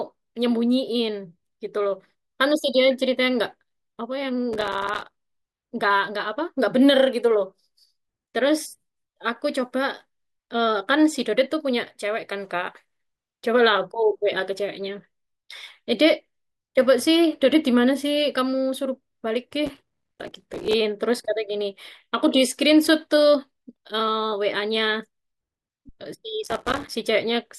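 A gritty, tearing crackle rides over the speech from 4.53 to 5.13 s, again from 19.66 to 20.73 s, and once more from 26.43 to 26.93 s. This is processor overload crackle: the processor fell behind on its short audio buffers, each only a few milliseconds long, and missed dozens of deadlines in a row. Every missed buffer dropped out as a hard-edged sliver of silence, and together these dropouts chop the sound into a rough, crackling burst.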